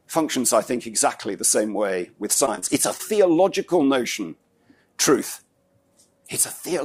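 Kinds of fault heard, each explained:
Repeated packet loss (robotic sound): Between 2.33 and 3.01 s the audio breaks into a string of short holes, about six, none longer than 24 ms. Each is patched by stretching the sound just before it, which together covers around 17% of that stretch and gives it a choppy texture with pieces missing. That concealment is what sets it apart from plain dropouts, which would leave silent gaps.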